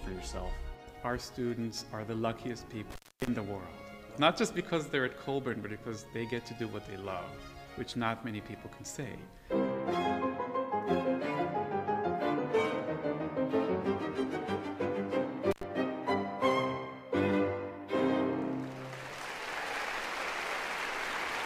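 At 2.9 s the sound drops out abruptly, with a crackle at each edge, and stays gone for about 265 ms before returning near 3.27 s. A shorter dropout of the same kind follows at 15.51 s, lasting about 87 ms and ending by 15.63 s. Both are an intermittent contact: a loose plug or cable momentarily losing its connection, so the signal path opens, then snaps shut again with a scratchy click.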